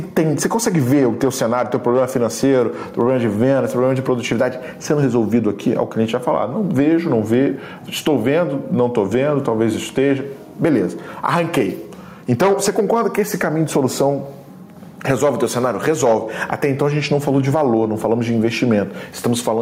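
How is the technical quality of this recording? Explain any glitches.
The recording has one fault, and it runs through the whole clip.

Gain pumping, throughout: the input gain was likely set far too high, so a fast limiter clamps down on every loud sound, swinging the level by around 10 dB. Loud and soft passages are squashed close together in level.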